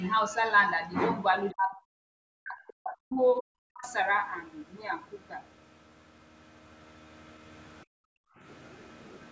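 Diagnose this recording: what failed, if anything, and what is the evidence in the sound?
Speech suppressed in double talk at 1.52–1.8 s, 2.23–3.56 s and 3.72–3.85 s: the speech dips by roughly 30 to 40 dB, likely call-processing echo suppression during overlapping talk.

Background gated by the echo canceller at 7.85–8.41 s: call processing clamps the microphone while the loudspeaker plays, so room sound drops about 40 dB, then returns.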